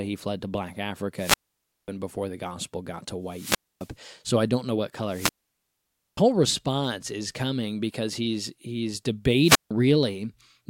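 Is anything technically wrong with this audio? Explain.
Yes. The speech repeatedly drops out with a wireless microphone squelch dropout. Each time, a short burst of hiss or static rises, the sound falls into a hole of near silence, and then the speech comes back. This happens at 1.15 to 1.89 s (a mute of about 0.54 s), at 3.26 to 3.93 s just after "the gospel got to" (0.26 s), at 5.07 to 6.22 s between "I don't know what" and "response is coming because" (0.89 s), and at 9.41 to 9.71 s after "coming because he's he's" (0.16 s). The radio link from the analogue FM transmitter weakens until the receiver's squelch gate decides there is no usable carrier and mutes its output. The rising static is the fading signal just before the gate closes.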